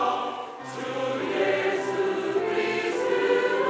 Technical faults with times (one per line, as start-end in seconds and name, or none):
none